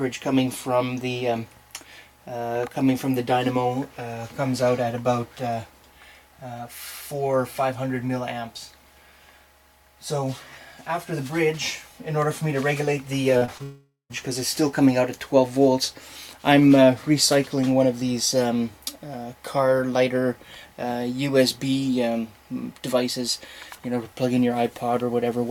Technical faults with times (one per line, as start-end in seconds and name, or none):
13.37-13.61 short concealed packet loss
13.63-14.12 long network dropout